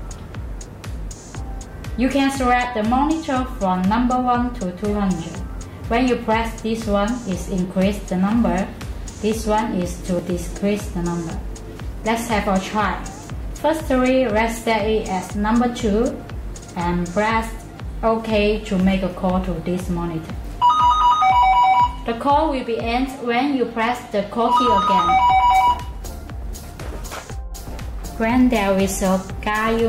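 At 5.84 s the audio jumps ahead, skipping roughly 30 ms, most likely a dropped buffer (overrun). Unlike an underrun, no silent gap or repeated fragment appears; the material on either side is spliced straight together.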